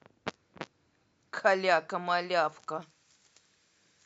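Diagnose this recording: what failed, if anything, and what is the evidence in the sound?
Pre-emphasis left on, in the recording or transmission chain. From 2.82 s to the end, the speech turns thin, bright and sibilant. Treble sits about 11 dB high at 10 kHz relative to 1 kHz, which fits a J.17 curve. The matching de-emphasis was never applied.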